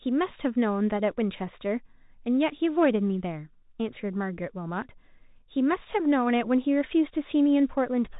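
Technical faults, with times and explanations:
Throughout: Bluetooth CVSD headset codec. The speech is band-limited with nothing above 4 kHz, so it sounds narrow and muffled at the top. The codec sends one bit per sample, up or down, with an adapting step size, which fits a 64 kbps headset link. Loud, fast-rising sounds outrun that step and distort, s sounds come out scratchy, and a granular hiss sits under the speech, all plainly audible.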